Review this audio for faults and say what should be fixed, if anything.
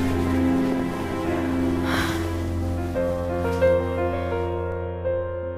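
Regular clicks, about four, recur every 1.37 s from 0.60 s to 4.72 s, likely clock drift buffer slips: a clock mismatch near 150 ppm drops or repeats a few samples each time. Locking both devices to a shared word clock, or using an adaptive resampler between them, would prevent it.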